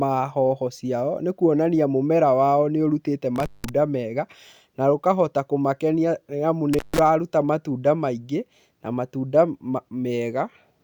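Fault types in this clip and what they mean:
intermittent contact: a loose connection briefly opens, so the speech drops out for about 180 ms after "mũmera wao nĩ ũrũtite" and 150 ms before "matũnda maingi na matũnda".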